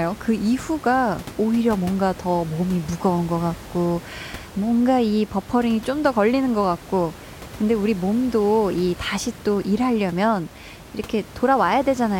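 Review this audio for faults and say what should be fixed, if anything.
Nothing should be fixed, as there are no faults in this audio.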